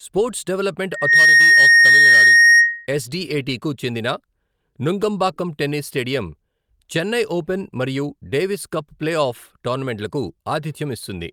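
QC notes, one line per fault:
0.91 to 2.87 s, loudspeaker feedback squeal: a single tone at 1.9 kHz swells from nothing to roughly 15 dB above the speech in about a third of a second, then holds until it stops at 2.87 s. The microphone is hearing its own loudspeaker, and at that pitch the loop gain passes one, so the tone feeds itself. Unlike a steady interference tone or whistle, it grows on its own and ignores what the speech is doing.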